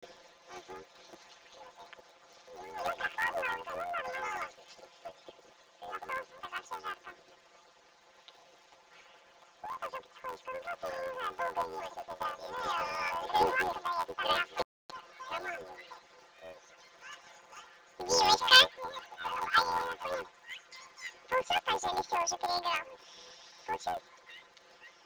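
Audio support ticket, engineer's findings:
Planar audio read as interleaved, throughout. Robotic buzz at about 86.1 Hz, no clear octave shift. Block period 11.61 ms, fits a 512-sample planar block. Each block's left half, then right half, played at double speed. Probable component: sample-format conversion or decoder output stage. Spectrogram: vertical striations every 11.61 ms, harmonic comb spaced 86.1 Hz. Waveform: step discontinuities at each block and half-block boundary.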